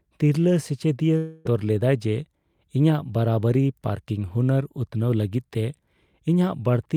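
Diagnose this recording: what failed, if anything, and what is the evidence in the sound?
Network stage, likely a long network dropout. From 1.17 to 1.47 s the speech gives way to a smeared, fading buzz that fills the whole gap with no silence, as the receiver stretches the last sound. It resumes at "ᱞᱮᱫᱟᱭ ᱡᱮ", with about 0.28 s of audio lost.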